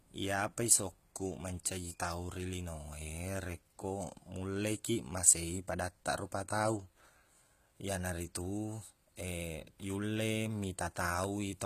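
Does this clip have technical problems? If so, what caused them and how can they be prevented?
Yes. HE-AAC compression runs throughout the speech. The top end sounds synthetic: s sounds come out gritty and metallic, and nothing is present above 14.9 kHz. The likely cause is spectral band replication copying lower bands upward to fake the treble, which fits a very low bitrate around 20 kbps. To prevent it, encode at a higher bitrate, or with standard AAC or Opus at a bitrate where the full spectrum is coded directly.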